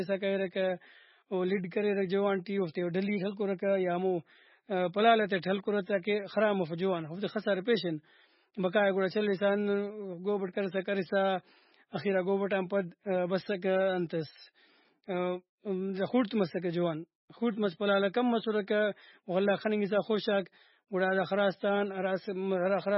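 Heavy MP3 compression, most likely at a very low bitrate of around 17 kbps, runs through the whole of this speech recording. Starved of bits, the encoder has cut off the treble at about 5.6 kHz, so nothing above that survives and s sounds lose their edge. Weak frequency lines drop in and out from frame to frame, which gives the speech a watery, swirling texture, with metallic chirps and smeared consonant attacks.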